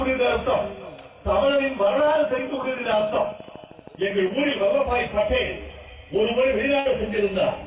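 This audio has come through a narrowband call path, with nothing above 4 kHz, which fits a G.711 A-law link at 64 kbps. From 2.00 s to 4.66 s there's a train of clicks, regular ticks at about 12.8 per second, so roughly forty in all. They peak at about the same level as the audio itself, so they're heard over the audio, pauses included. The steady pace and same-shaped pulses point to something injecting a repeating spike, likely interference from nearby gear or a faulty connection or power supply. Right near the end of that stretch, at 4.28 s, there's a short concealed packet loss. About 20 ms of audio never arrived, and the receiver papered over roughly 13 ms of it by carrying the last sound forward before blending back in. You hear it as a quick smear or wobble. The bigger one is a burst of packet loss from 6.79 s to 6.87 s. About 60 ms went missing in one go, and the concealment stretched the previous sound across roughly 59 ms while fading it down, so you get a brief held buzz or dying hiss. 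Then the audio picks up further along, with that slice simply gone.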